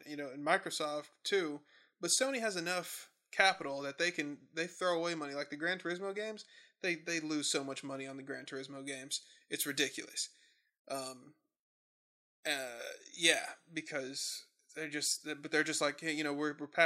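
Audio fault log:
8.87–13.74 s, pre-emphasis left on: speech turns thin, bright and hissy on sibilants; an FM 75 µs treble boost, about 14 dB at 10 kHz, was never de-emphasised.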